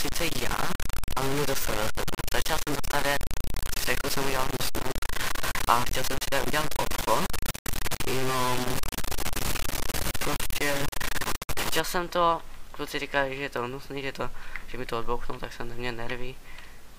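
From the start to 11.8 s the sound is coarse and grainy, with a distortion that rises and falls with the signal. The quiet passages break up into a sputtering rasp or drop out to silence. The error is roughly as loud as the sound itself. This is likely low bit depth without dither: truncation to only 4 bits, where each sample snaps to a few steps and the rounding error tracks the waveform.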